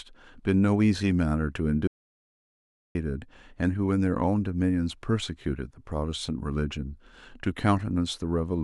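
The input was likely lost from 1.87 to 2.95 s, an audio dropout to silence: speech cuts out mid-flow, leaving 1.08 s of total, roomless silence.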